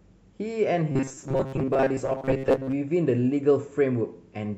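From 0.92 to 2.73 s, audio likely arrived too seldom and short buffers were repeated, producing robotic sound from repeated short buffers: a rigid, metallic 134 Hz buzz.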